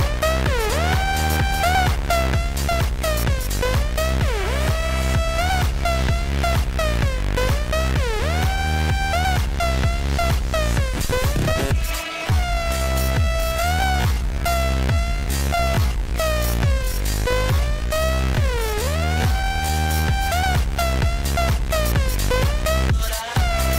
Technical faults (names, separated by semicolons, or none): time-stretched section